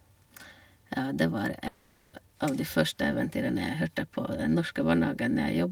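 A long network dropout likely starved the receiver from 1.67 to 2.15 s; it filled the missing 460 ms with a fading buzzy continuation before the speech resumes.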